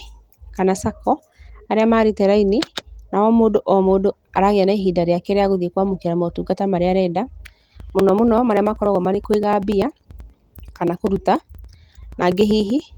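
From 7.61 to 12.89 s, after "kwamũkĩra motungata marĩa arenda", periodic USB or driver dropouts skip a few milliseconds every 0.096 s, producing evenly spaced ticks rather than irregular packet-loss glitches.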